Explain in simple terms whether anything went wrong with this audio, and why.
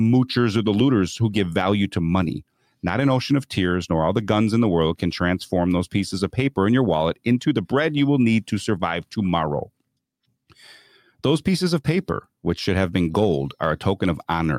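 Nothing went wrong with this audio, because no fault can be heard anywhere in this speech recording.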